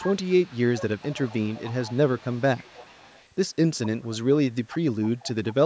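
A faint, delayed copy of the speech trails behind it by about 0.43 s, from 0.0 to 0.56 s, 0.72 to 3.28 s, 3.83 to 4.07 s, 4.69 to 4.79 s, 5.01 to 5.28 s and 5.46 to 5.55 s. It sits roughly 15 to 25 dB below the direct sound. This echo leak likely comes from a far end on loudspeaker whose echo canceller let its microphone return the call.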